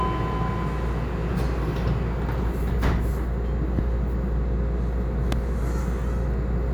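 A sudden voltage step, likely from a plug, switch or static discharge, breaks into the signal twice, giving a loud pop at 3.79–3.81 s and again at 5.32–5.35 s. Each is a single sharp thump about 15 dB above the sound, which continues beneath it.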